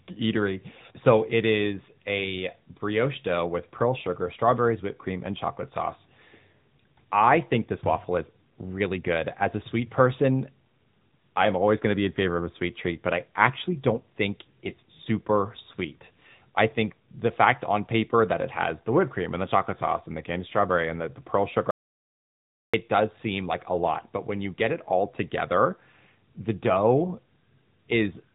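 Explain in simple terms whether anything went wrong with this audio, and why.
The whole recording sounds thin, muffled and clearly buzzy, like a phone call. That is the AMR narrowband mobile codec, which drops everything above 3.8 kHz and squeezes speech hard.

From 21.71 to 22.74 s, right after "the the pearl sugar", the sound cuts to dead silence for about a second before "does seem like a". This audio dropout to silence likely came from the input briefly disconnecting or muting.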